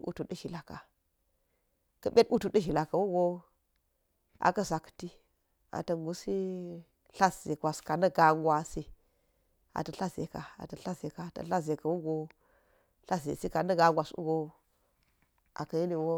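No technical faults can be heard in this speech recording.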